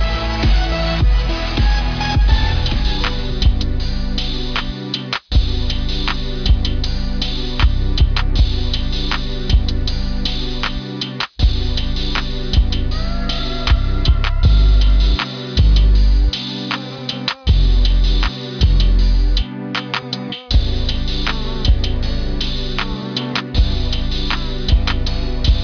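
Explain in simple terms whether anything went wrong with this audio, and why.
Throughout the whole clip, the sound has a gritty, metallic edge, as if high sounds were turned into wrong, out-of-place tones. That is aliasing. The audio was converted to a much lower sample rate, which fits a drop from 48 kHz to 11 kHz, without first removing the high sounds the new rate can't hold. Everything above 5.5 kHz folded back down into lower, unrelated pitches.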